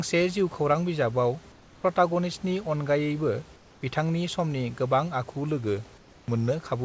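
Speech carried over a call path that stops at 8 kHz, with comfort noise in place of the background at 1.52–1.84 s (just before "प्रटागनिस्टनि अनगायैबा बिथांनि समनि"), 3.56–3.82 s (after "बिजाबाव प्रटागनिस्टनि अनगायैबा") and 5.98–6.28 s. In each pause the room's textured background turns into a flat, featureless hiss about 3 dB quieter, likely discontinuous transmission filling silence with synthetic noise, unlike a dropout, which goes silent. A drift correction step follows "अनगायैबा बिथांनि समनि गोबां": from 5.23 to 6.51 s playback runs 5.95% slow and drops about a semitone (106 cents). Speed and pitch move together, which rules out a pitch-only error.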